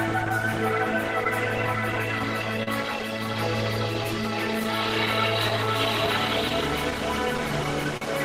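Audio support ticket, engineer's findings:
Clock drift between sender and receiver, whole clip. Sender clock runs about 2% slow. Jitter buffer keeps draining. Uneven timing hiccups recur through the music.

Scattered short gaps, 0.29–2.68 s and 4.04–8.02 s. Roughly seven, then ten lost or late packets. Concealed by extending prior sound. Brief ticks and smears, longest around 40 ms.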